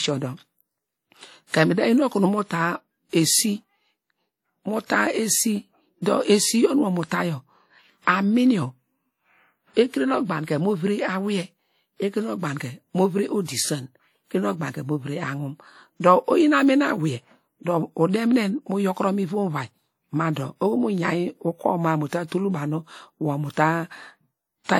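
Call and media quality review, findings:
WMA compression: washy, ringing speech with hiss breathing with the level, throughout. Likely a WMA encoder at a low bitrate, around 48 kbps. Spectrogram: hard ceiling at 18 kHz, smeared blurry harmonics, gaps where weak components were zeroed by coarse quantisation.

Pre-echo at 4.86 s and 22.27 s, the latter between "mu ta" and "banu wor mu": short hiss ahead of sharp onsets, attacks softened. Waveform: noise floor rising about 42 ms and 46 ms before each transient. Transform block spreading quantisation noise sized for the attack into the quiet lead-in.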